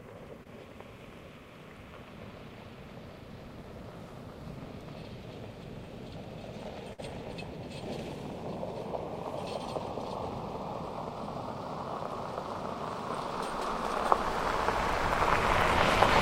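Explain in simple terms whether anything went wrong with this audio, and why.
At 0.43 to 0.47 s there is a short concealed packet loss: a tiny moment of sound went missing and was patched over, leaving a quick smear rather than a gap.

From 6.93 to 7.00 s a burst of packet loss is longer: about 50 ms is filled with the last sound, which fades, then the audio jumps ahead.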